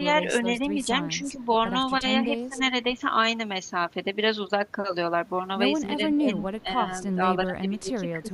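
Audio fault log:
0.74–0.87 s and 1.07–1.38 s, speech suppressed in double talk: brief shallow dips of about 5 dB. The waveform envelope pinches slightly.
2.3–2.61 s, 6.15–6.8 s, 7.14–7.2 s and 7.44–8.33 s, speech suppressed in double talk: deeper cuts of around 15 dB. The speech level drops, seen as sudden amplitude troughs. This is likely an echo canceller attenuating the talker while the far side also speaks.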